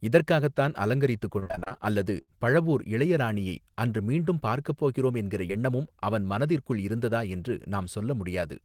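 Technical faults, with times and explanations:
1.39–1.79 s, repeated packet loss (robotic sound): over this 0.4 s stretch the network path dropped or delayed packets again and again, leaving eight gaps, none longer than 30 ms. The receiver covered each one by extending the preceding speech, so 51% of the span is patched audio, about 170 ms of it, standing in for 160 ms that never arrived. The rapid alternation of real and synthesised sound makes the speech choppy and robotic, with fragments missing.
2.21–2.30 s, burst of packet loss: a run of consecutive packets failed to reach the decoder in time, wiping out about 60 ms of speech in one block. The receiver bridged the hole with 61 ms of continued sound that it faded down as the gap lengthened, so the speech briefly turns into a held, dimming buzz or hiss. Playback then jumps forward to later speech, and the material in between is simply absent.
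5.48–5.51 s, short concealed packet loss: roughly 20 ms of audio missed its playout deadline, and the decoder patched it with about 13 ms of sound extrapolated from the pitch or noise just before, then crossfaded back into the real signal. Because the hole is so short, it comes across as a quick smear or wobble in the speech, though a brief consonant could be swallowed in the patch.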